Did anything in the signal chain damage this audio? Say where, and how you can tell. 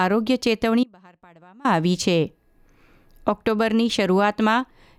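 Yes. An audio dropout to a faint residue runs from 0.84 s to 1.65 s, a gap of about 0.81 s. The sound cuts off abruptly mid-flow rather than pausing or fading, yet the gap isn't silent. A faint residue continues roughly 30 dB below the signal's normal level, so the path downstream stayed live while the main feed was lost. The likely stage is the analogue wiring, such as an intermittent contact.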